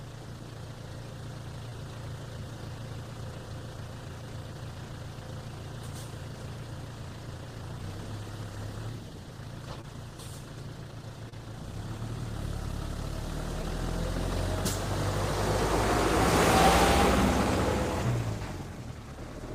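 A recording of everyday sounds, marked by four brief smears or wobbles at 1.69, 9.81, 11.29 and 13.62 s, each a few hundredths of a second long, where the sound momentarily blurs before settling back. This is short concealed packet loss: about 20 ms of audio arrived too late for the decoder each time, and the receiver patched the gap by extending the preceding sound for roughly 15 to 25 ms before crossfading back into the real signal.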